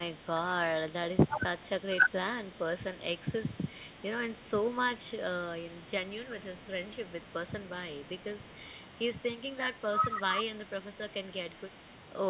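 An echo canceller that likely could not separate its own talker from loudspeaker echo while both sides talked at once turned the near-end signal down along with the echo. The result is speech suppressed in double talk at 0.12, 1.24, 1.89, 6.16, 9.55 and 10.54 s. Each dip drops the speech by about 10 to 20 dB for a fraction of a second, longest from 9.55 to 10.18 s. Beneath it, the band-limited call sound, with nothing above 4 kHz, fits a 64 kbps G.711 mu-law path.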